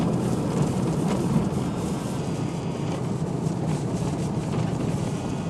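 For the first 2.18 s the sound runs fast and sharp, about 1.09 times speed and roughly 1.5 semitones high, a classic wrong sample rate. Speed and pitch shifting together like that fits 44.1 kHz material being played out at 48 kHz without conversion.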